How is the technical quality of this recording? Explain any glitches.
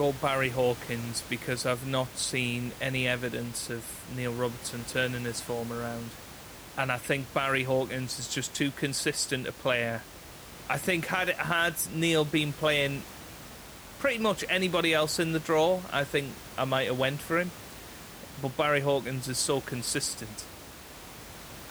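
No technical faults are audible.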